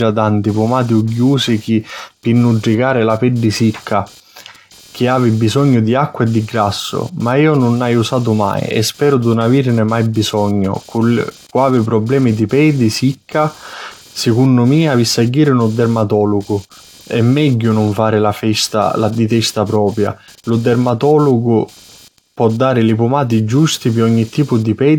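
Computer activity noise runs throughout: processor or peripheral load disturbing the shared ground adds a buzzy chirping pulse near 200 Hz, about 30 dB below the speech.

Generation loss is also present throughout: the speech sounds swirly and smeared with blurred attacks and nothing above 19.4 kHz, likely from a few repeated passes through AAC-LC at around 96 kbit/s.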